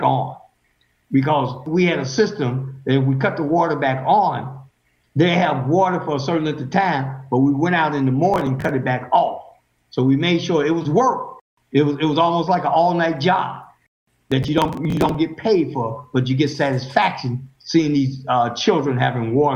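From 8.34 to 8.71 s, then from 14.32 to 15.15 s, there is processor overload crackle. The processor misses a run of buffers of a few milliseconds each and skips them, and the hard-edged gaps pile up into a gritty tearing over the sound.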